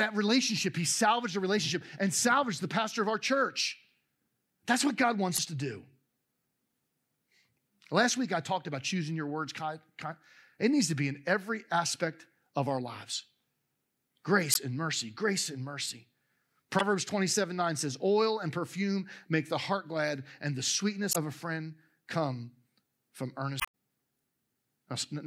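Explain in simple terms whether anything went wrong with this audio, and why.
Five brief glitches break through the speech, at 5.35–5.40, 14.51–14.57, 16.77–16.82, 21.10–21.16 and 23.57–23.68 seconds. They come from damaged data in a compressed stream: the decoder hit corrupted bytes, lost its place, and garbled the sound until it found the next intact chunk.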